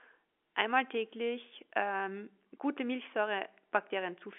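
No faults found in the speech, which carries the expected G.711 A-law telephone band, roughly 250 Hz to 3.4 kHz, with nothing above 3.7 kHz.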